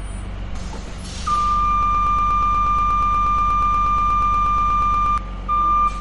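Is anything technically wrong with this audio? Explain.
Yes, there are two faults. Throughout the clip there is MP3 compression damage. Nothing is present above about 11.1 kHz, and the remaining sound has a plainly audible watery, swirling quality. This is likely the result of a low-bitrate MP3 encode, with the damage consistent with roughly 48 kbps. When bits run that short, the encoder cuts off the treble at a fixed point and drops quieter frequency components. Those components flicker in and out from frame to frame, which produces the swirl and smears attacks.

From 1.83 s to 5.18 s there is a broken-record loop. A fragment of about 0.12 s repeats exactly, back to back, 28 times, giving a stuttering, machine-gun effect for over three seconds. The likely cause is a stall in the player, encoder or stream that kept resending the last fragment it held. Whatever audio belonged in that span is lost, and normal playback resumes only after 5.18 s.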